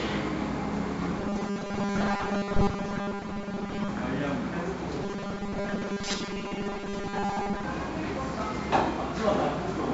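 4-bit ADPCM compression runs through the whole clip. Each sample is coded as a coarse 4-bit step from a prediction, leaving a gritty hiss that rises with loud sounds and roughens sharp attacks. Nothing reaches above 7.8 kHz, which fits a 16 kHz sample rate at 64 kbps.

Robotic sound from repeated short buffers appears from 1.19 to 3.89 s and again from 5.04 to 7.64 s: a rigid metallic buzz at 200 Hz. The likely cause is a 5 ms stretch being looped while most of the real audio is skipped.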